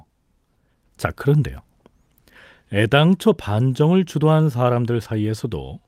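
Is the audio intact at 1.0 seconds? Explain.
Yes, the speech at 1.0 seconds is intact, with no dropout, click, distortion or other fault audible at that point.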